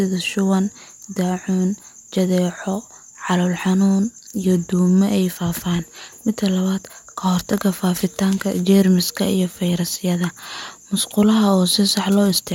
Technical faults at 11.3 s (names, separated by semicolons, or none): none